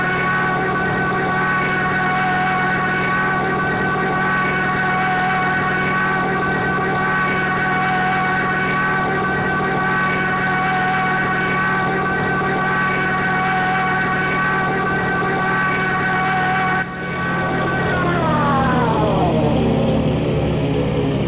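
No technical faults are audible.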